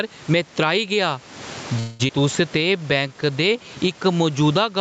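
Right from the start and all the way through, you can hear gain pumping. The background swells up whenever the speech pauses and then ducks under each loud syllable, with a swing of around 20 dB. Loud and soft parts end up squashed toward the same level. The likely cause is the input gain set far too hot for the mic, with a fast limiter or compressor clamping down on every peak. The room noise underneath is real room sound, not a fault. It's just what gets dragged up in the gaps.

Between 1.79 and 2.02 s there's a call audio freeze. The sound stops moving forward and the last bit gets stretched out into a fading buzz or hiss for about 200 ms. Then the speech picks up exactly where it left off, so nothing is lost. It's just a hole pushed into the timeline. That likely comes from packets getting held up in transit, leaving the jitter buffer with nothing to play.

Right after that, around 2.07 to 2.12 s, the audio skips ahead. 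Roughly 150 ms of speech just vanishes, and the two sides get stitched together almost directly, with only a tiny filler in between. Playback jumps forward because that stretch was dropped while later audio was already queued up. That can happen in transit, or when the jitter buffer overflows and throws out audio to catch up.

From 2.58 to 3.95 s you get a jitter buffer slow-down. The speech runs at about 89% speed while keeping its pitch, so sounds feel drawn out, with maybe a faint warble. The receiver was building its reserve back up by repeating individual pitch periods and slivers of pauses, which adds about 163 ms over that stretch. Through all of it the top end stops at 8 kHz, which is the normal limit for this kind of call path.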